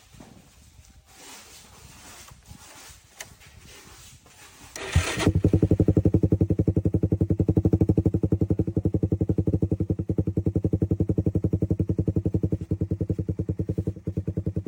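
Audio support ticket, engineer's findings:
Skip at 9.52 s; audio jumps ahead by about one frame, roughly 20 ms. Compressed frames skipped, at the decoder or source file. Single frame, 23.2 ms long, missing or rejected as damaged.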